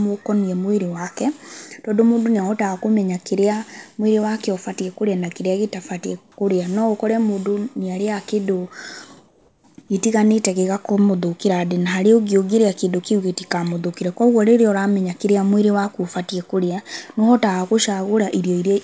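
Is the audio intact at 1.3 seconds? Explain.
Yes, the speech is intact at 1.3 seconds, carried through the WebRTC call path's G.722 coding as normal, with nothing above 8 kHz as that codec's bandwidth allows.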